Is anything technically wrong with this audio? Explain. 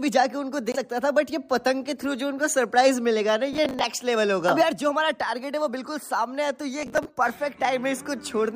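Yes. There are two kinds of fault.

At 0.72 to 0.76 s, the audio drops out to silence for about 21 ms, then picks up again. This is likely a Bluetooth stall. Interference delays the radio packets. The headphones' buffer empties before the resent packets arrive. Playback has nothing to play, so it simply pauses. The gap is short but clean, a hole in the sound rather than a click.

From 3.53 to 3.84 s and again from 6.8 to 7.05 s, there is processor overload crackle. In each burst the processor misses its deadlines over and over. Each miss replays a piece of old audio with hard edges, in place of the fresh buffer. The spacing fits buffers of around 10 ms, with roughly ten misses per burst. The result is a gritty, tearing crackle over the sound. It stops once the load passes.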